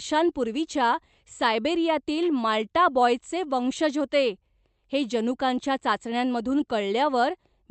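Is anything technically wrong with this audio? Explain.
No, nothing in this speech clip points to a technical problem. It has come through a WebRTC call path in working order, and its top end stops at about 8 kHz, which fits an Opus call codec running at a wideband setting.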